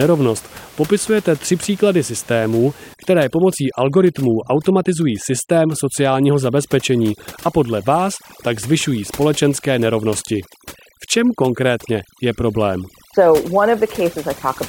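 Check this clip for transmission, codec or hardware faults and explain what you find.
There's one real problem. From 2.94 s, just after "popisujete tři příklady systémů", to the end, overdone noise removal clamps bands near its noise estimate. Background collapses into twinkly near-silence. The room noise, about 22 dB under the speech, is part of the recording.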